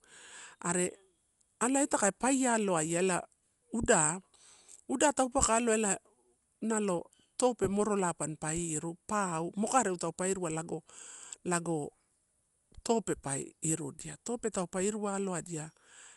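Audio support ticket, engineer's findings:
Dull, band-limited speech throughout, nothing above 11.4 kHz, rough fluttery noise hanging round tones. Likely Dolby Digital compression at a starved rate, fits 64 kbps: encoder chops the top band, and the decoder fills zero-bit frequency lines with dither.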